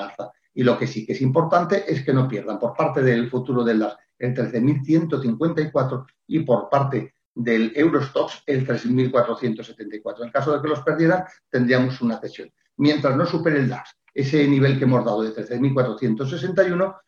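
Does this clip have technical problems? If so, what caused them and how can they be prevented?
Yes. From 5.43 s to 9.43 s the sound abruptly degrades, with rising codec artefacts, then snaps back to full quality with no gap at either edge. This is an adaptive stream at a lower bitrate: the connection slowed, so the player switched to a low-rate version for four seconds. The sound points to a fall from about 96 kbit/s AAC to a 20 kbit/s HE-AAC rendition. Preventing it requires a steadier, faster connection or a larger player buffer.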